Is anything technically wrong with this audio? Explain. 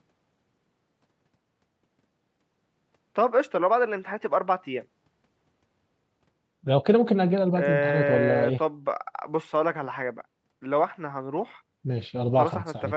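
No, nothing in this speech stood out as a technical problem on listening.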